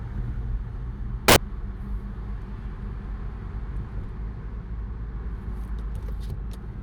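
From 1.28 to 1.36 s a brief burst of loud, harsh broadband noise replaces the sound. These are samples built from the wrong bytes: the reader assembled each value misaligned or byte-swapped, so the rapidly changing low-order bits became the dominant part of every sample.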